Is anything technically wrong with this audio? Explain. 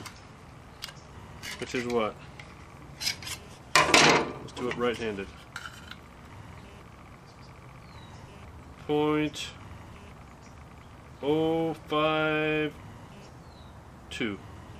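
Yes. There are chunks out of order at 0.82–0.85 s and 7.79–7.81 s. In each, a roughly 12 ms block plays one slot late. You hear a brief jumbled flicker at three hard joins. Unlike a dropout, nothing is missing.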